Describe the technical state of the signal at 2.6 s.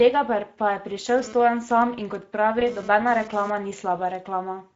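Speex codec damage runs through the whole clip at 2.6 s: the narrow CELP excitation leaves the speech plainly hoarse and noisy rather than clipped, which fits a rate near 17 kbps.

GSM phone buzz covers 1.18 to 3.50 s. A phone's 217 Hz transmit bursts are rectified into a raspy, harmonic-rich buzz about 17 dB below the speech. It is unrelated to the voice and comes and goes, as it does during a data transfer.

VoIP packet loss concealed by the speech codec occurs at 2.59 to 2.65 s. About 20 ms of audio, pointing to a single lost frame, is extrapolated into a fading buzzy tone or coloured noise. Unlike the external buzz, it follows the voice's pitch and leaves the speech weakened briefly afterwards.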